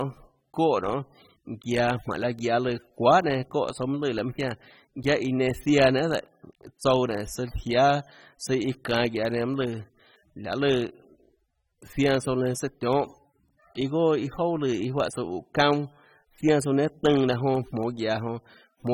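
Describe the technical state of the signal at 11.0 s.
AAC compression is audible at 11.0 s, as throughout the clip. The texture fits AAC-LC at about 27 kbps, likely quantised so coarsely that bands thin out or fill with substitute noise. The speech sounds dull and smeared, with fizzy sibilants and nothing above 18.6 kHz.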